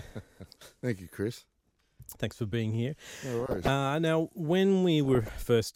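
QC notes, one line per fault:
0.98–1.12 s, 3.40–3.68 s and 5.05–5.30 s, DAB burbling: a few bit errors slip past error correction, so sub-bands get short noise blips or jump in level for up to a frame, giving a burbling, bubbly sound over the speech.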